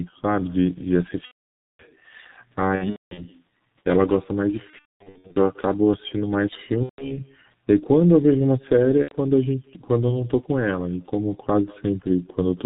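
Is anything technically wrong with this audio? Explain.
Yes. Three faults are audible in this speech clip.

Throughout, there is echo with no canceller. A quieter, thinner copy of the talking trails about a fifth of a second behind, roughly 28 dB down. The far end's loudspeaker feeds its microphone and nothing subtracts it. On a spectrogram, each syllable has a faint, delayed ghost.

Also throughout, the G.723.1 codec damage is heavy. The speech is muffled and hoarse, with smeared consonants, which fits the codec's roughly 6 kbit/s mode. Its coarse 30 ms frames and slow voice model discard detail, and a spectrogram shows nothing above 4 kHz.

VoIP packet loss concealed by the speech codec occurs at 1.25–1.86 s, 2.75–3.26 s, 4.70–5.37 s, 6.84–7.24 s and 9.02–9.16 s. The decoder extends its last pitch and filter, so the sound stretches into a buzzy tone or coloured noise that fades. The waveform envelope decays before recovering weakly.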